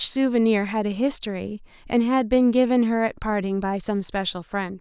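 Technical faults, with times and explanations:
No technical faults are audible in this speech recording.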